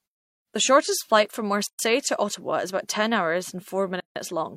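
Separately encoded pieces of this speech were joined without trimming the encoder delay and end padding, so silence sits at each join: a gap at a join of encoded pieces. The first opens at 1.67 s, right after "shortest flight from", lasting 122 ms; the second at 4.00 s runs 157 ms. Each cuts the sound off abruptly, smeared at the edges, then resumes mid-flow, unlike the gentle fades of the muted pauses.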